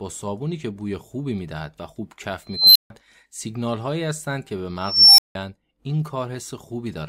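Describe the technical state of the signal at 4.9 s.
An unstable filter is active at 4.9 s, in the span from 4.80 to 5.35 s. A recursive filter in the speech path has gone unstable, so its feedback keeps amplifying its own output. A high tone around 5 kHz swells over about 0.38 s into a loud, clipped squeal. When the values overflow, the output drops out into roughly 0.17 s of silence until the filter resets at 5.35 s.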